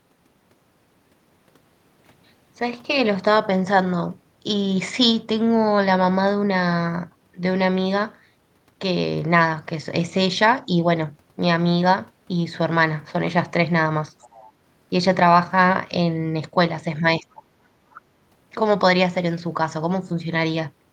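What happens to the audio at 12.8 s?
Nothing goes wrong at 12.8 s; the speech carries on intact through that moment, with no dropout, click, glitch or other fault.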